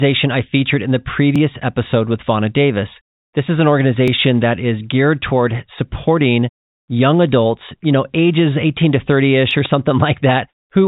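Just after "I featured in the", from 1.36 s to 9.51 s, clock drift buffer slips give a regular click every 2.72 s. Likely cause: mismatched device clocks repeating or dropping small sample blocks. At 9.65 to 9.68 s, a single loud pop stands a few dB above the speech, likely from an electrical or driver pulse, over telephone-band audio capped near 3.8 kHz.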